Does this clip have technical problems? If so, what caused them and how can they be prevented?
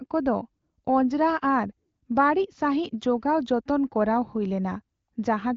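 No, the speech is carried by an AMR wideband (HD Voice) link at about 15.85 kbit/s, a rate high enough to keep it clear, with only light coding traces and no content above 7.5 kHz, as expected of that wideband path, which tops out near 7 kHz.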